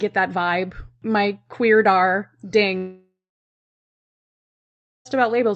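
At 2.77 s the incoming packets most likely stopped arriving, a long network dropout lasting until 5.07 s. About 2.3 s of the speech never reaches the listener. The receiver stretches the last sound it had into a fading buzz for a few tenths of a second, leaving roughly 1.9 s of silence. The speech then resumes mid-stream, the lost section simply gone, still carrying the call codec's usual coding noise and its top end capped near 8 kHz.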